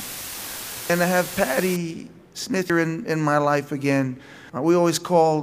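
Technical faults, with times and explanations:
0.00 to 1.76 s, low bit depth with dither: For this stretch the sound is carried by only about 5 bits. Noise was mixed in before each sample was rounded to so few levels, which turns what would have been grainy distortion into a steady, even white hiss. That hiss sits roughly 10 dB below the sound itself, loud enough to hear clearly, and it stops when the coarse section ends at 1.76 s.
0.90, 2.70 and 4.50 s, audio missing between chunks: At each of these moments roughly 200 ms of sound is gone, and the material on either side is butted together with no silence, so it jumps forward. The skips fall every 1.8 s, which fits a process likely working in 2-second blocks and losing the tail of each block while it hands over to the next. The regular spacing gives the cuts away.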